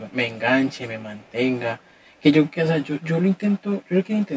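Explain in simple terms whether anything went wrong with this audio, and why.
One of the two audio channels arrived about 10 milliseconds late, and the two were then mixed into one. This is called channel delay (comb filtering): matching parts cancel at evenly spaced pitches from around 50 Hz upward, so the whole clip sounds hollow and slightly phasey.

Short stretches also carry a faint repeat of the speech about 383 milliseconds behind it, at 0.00 to 0.14, 1.15 to 1.33 and 1.78 to 2.22 seconds. This is most likely echo leak, where sound from a loudspeaker slipped past the call's echo cancelling and was sent back. The last stretch is even fainter.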